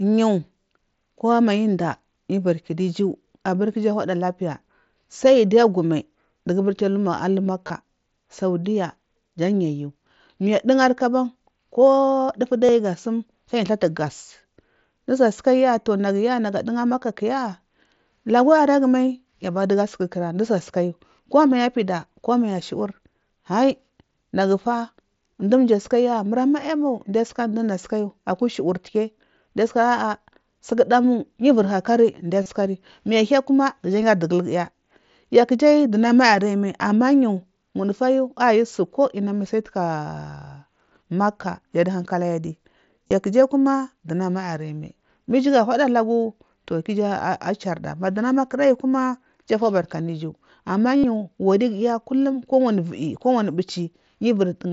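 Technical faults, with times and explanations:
7.68, 12.65, 32.43, 43.08 and 50.97 s: concealed Bluetooth headset packet loss. Gaps of 22 to 75 ms are refilled by looping the last short waveform stretch, giving a brief buzzy held tone. The longest follows "fubarka anu iju ama". Spectrograms show flat harmonic stripes, and waveforms show a repeated cycle at steady level.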